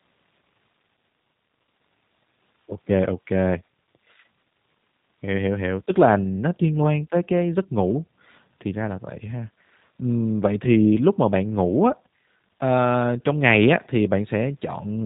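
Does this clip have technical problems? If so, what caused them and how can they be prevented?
Yes. G.729 codec damage throughout: speech rebuilt from a vocal tract model and sparse pulses loses everything above 4 kHz and sounds rough, which fits 8 kbit/s G.729A. Prevent it by carrying the call over a wideband codec such as Opus or G.722 at a higher bitrate.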